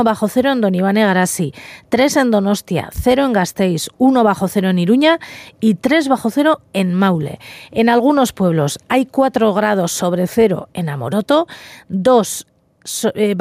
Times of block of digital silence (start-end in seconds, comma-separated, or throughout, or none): none